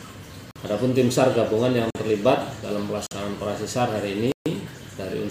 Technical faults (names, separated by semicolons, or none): block of digital silence